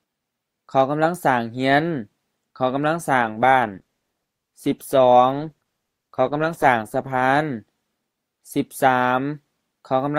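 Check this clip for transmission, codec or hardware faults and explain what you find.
One fault is present: an adaptive stream at a lower bitrate. From 3.22 to 7.22 s codec artefacts rise, a change consistent with a drop from roughly 64 to 16 kbit/s Opus after the connection slowed. Unlike a dropout, quality switches abruptly at both edges with no gap.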